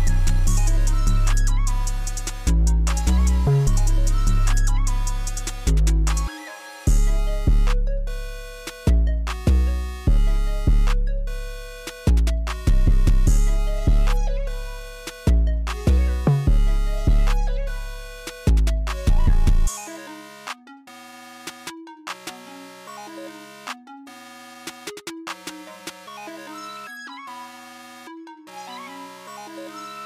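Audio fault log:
No faults are logged for this audio.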